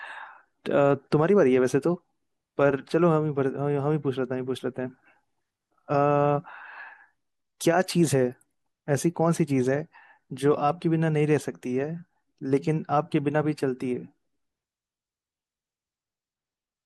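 No technical faults can be heard anywhere in the speech.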